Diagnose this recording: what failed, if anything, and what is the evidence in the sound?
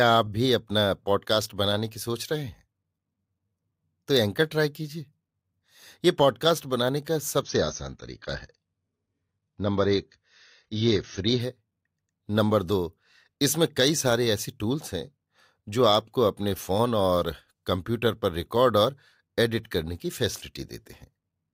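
Adaptive stream at a lower bitrate, 7.41 to 11.41 s: a network slowdown forced an abrupt, gapless switch to a leaner codec encode with nothing above 6.7 kHz.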